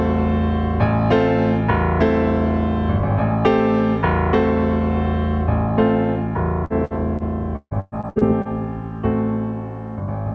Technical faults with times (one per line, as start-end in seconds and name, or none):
6.65-8.48 repeated packet loss (robotic sound)